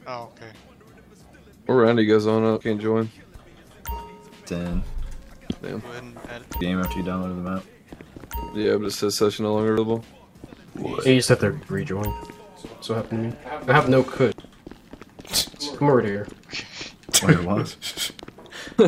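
At 2.61 to 2.64 s there is damaged data in a compressed stream. Part of the compressed data was corrupted. The decoder cannot read those frames cleanly and loses sync until it finds the next valid frame header. The result is a brief chirp, squawk, click or short hole in the sound. The same fault returns at 6.61 s and 9.78 s, both very short. It appears again at 14.32 to 14.35 s and at 18.19 to 18.22 s.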